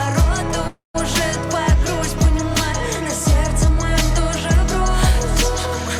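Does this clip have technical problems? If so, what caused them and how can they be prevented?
Yes. From 0.67 to 0.96 s the sound stalls into a fading buzz or hiss that drops to silence for about 150 ms, then resumes with nothing lost: a call audio freeze, likely from delayed packets draining the jitter buffer, inserting a 269 ms gap. Prevent it with a stable, prioritised network path and an adaptive jitter buffer.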